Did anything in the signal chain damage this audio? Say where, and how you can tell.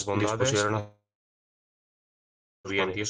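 Yes. The speech carries a doubled audio track from start to finish, most likely a second capture path or an edit that left two copies mixed out of step. A full-band echo of every sound follows roughly 0.7 s behind, at about the same level as the original, with no decay or room colouring. That flat, undiminished repeat points to a duplicated signal rather than acoustic reflection, and it makes the speech sound stacked on itself.

A long network dropout runs from 0.79 s to 2.67 s, most likely packet loss on the transport link. The receiver had nothing to play for about 1.86 s, so it stretched the last sound into a fading buzz before giving way to roughly 1.62 s of silence. Audio resumes at 2.67 s with the lost stretch simply gone, never replayed, which is the signature of concealment covering a gap rather than delayed delivery.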